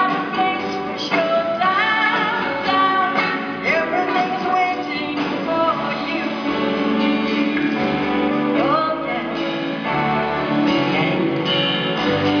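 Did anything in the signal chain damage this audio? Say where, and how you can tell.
No, nothing in the signal chain damaged this audio.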